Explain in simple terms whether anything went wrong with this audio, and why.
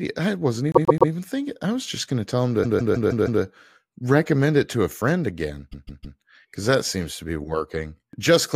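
Three times, a short piece of the speech plays over and over, causing a stutter. These are repeated frames. They come after "I wasn't" at 0.72 s, "going to tell them" at 2.63 s, and "to a friend again" at 5.71 s.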